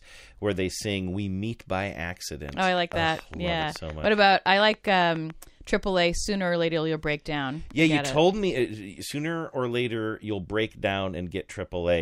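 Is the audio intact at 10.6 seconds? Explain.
Yes, at 10.6 seconds the speech is intact, with no fault present at that moment.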